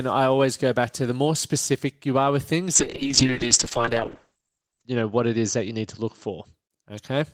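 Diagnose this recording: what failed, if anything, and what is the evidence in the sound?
Call bitrate drop at the codec. From 2.74 to 6.59 s, after "you are with things", speech turns rough and muffled above 8 kHz. It fits roughly 6 kbps.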